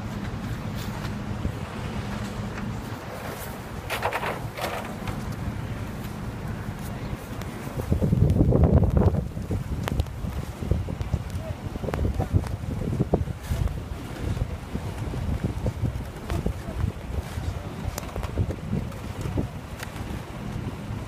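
No faults are audible anywhere in the recording.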